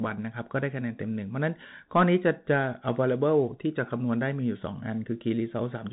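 Throughout, the speech carries Bluetooth CVSD headset codec damage: one-bit delta coding, consistent with 64 kbps, cuts everything above 3.8 kHz and leaves scratchy sibilants over granular hiss.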